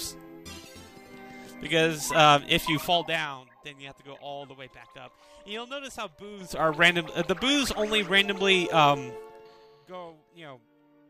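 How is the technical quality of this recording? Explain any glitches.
The recording has zipper noise during two level changes. From 2.79 to 3.44 s, the level falls about 15 dB in 2 dB steps. From 6.32 to 6.69 s, it rises about 15 dB in 4 dB steps. The steps come about ten times a second, with no smoothing. Each one clicks, so a ticking zip rides on the sound.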